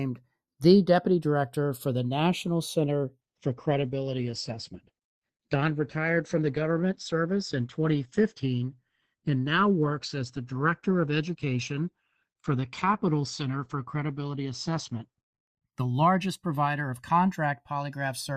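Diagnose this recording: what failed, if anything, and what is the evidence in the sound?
The two channels were captured by converters running on separate clocks, with a mismatch of roughly 50 parts per million, so the channels are drifting apart. The delay between them creeps from zero to about a millisecond across the recording. Summed to mono, that sliding offset drags comb-filter notches slowly through the spectrum, and the speech takes on a continuous flanging swirl from start to finish rather than any single event.

At the network stage, the adaptive stream dropped to a lower bitrate from 3.21 s to 15.21 s, switching from what sounds like a rate near 64 kbit/s Opus down to around 12 kbit/s. With fewer bits available, the encoder cut everything above 8.5 kHz and spent less on detail, so the speech suddenly turns dull, with more codec smearing. Quality snaps back at 15.21 s, and there is no gap at either switch.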